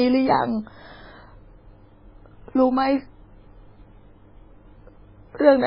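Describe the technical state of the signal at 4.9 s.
MP3 compression artefacts run throughout, including at 4.9 s: nothing remains above 5.3 kHz and the speech sounds watery, likely from encoding at a very low bitrate around 16 kbps.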